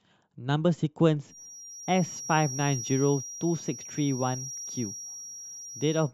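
From about 1.23 s right through to the end, a thin, steady whistle near 5.7 kHz sits about 15 dB under the speech, swelling and fading slowly in level. That's a feedback whistle, likely from the speaker-to-mic loop hovering just at the edge of feedback.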